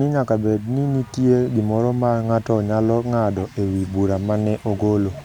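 Speech recording with no audible technical faults.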